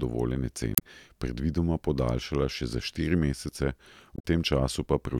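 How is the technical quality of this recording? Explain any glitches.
The recording has two short glitches, both from damaged data in a compressed stream. From 0.75 to 0.82 s and from 4.15 to 4.25 s, corrupted bytes make the decoder misread frames and hunt for sync, producing brief disruptions in the speech. These show as broadband vertical smears on a spectrogram and abrupt waveform discontinuities.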